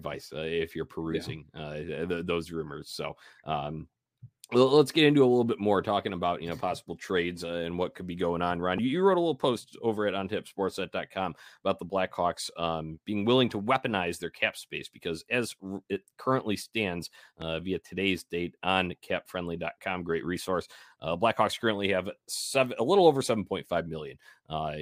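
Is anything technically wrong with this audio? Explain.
Yes, there are two loud pops in this speech, at 8.78 to 8.80 s and 17.42 to 17.44 s, around 10 dB and 5 dB above the signal. Each is a single sharp thump over the continuing speech, likely from a plug, switch or static spike hitting the line.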